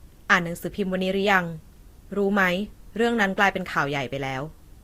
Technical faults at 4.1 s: transcoding between lossy codecs

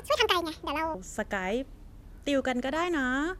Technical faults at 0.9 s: section at the wrong speed

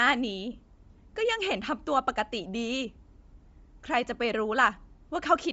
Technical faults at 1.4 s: Bluetooth LC3 compression

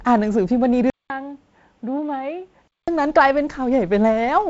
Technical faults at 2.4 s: input switched to a poorer device

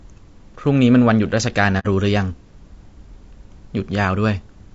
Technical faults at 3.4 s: low-delay AAC compression

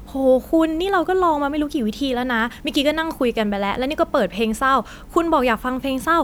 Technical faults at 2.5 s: none

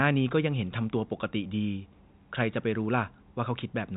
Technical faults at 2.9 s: none

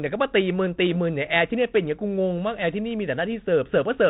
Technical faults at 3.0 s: none

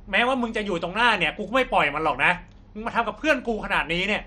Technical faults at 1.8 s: MP2 compression

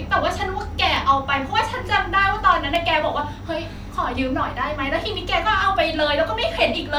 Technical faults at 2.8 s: dropped samples

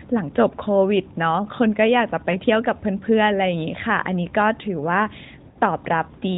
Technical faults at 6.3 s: none

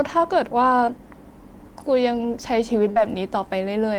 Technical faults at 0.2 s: none

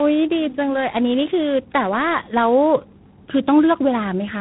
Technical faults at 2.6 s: tandem speech coding

